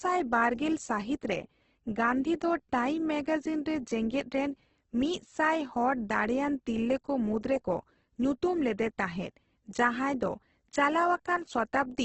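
From start to finish the speech has a coarse, grainy texture: vowels carry a gritty edge. Nothing is heard above about 8.2 kHz. This is likely heavy Opus compression, at a rate as low as about 12 kbps, filling starved bands with noise or folded copies instead of leaving holes. A spectrogram would show a hard ceiling at 8.2 kHz with smeared, noisy texture below it.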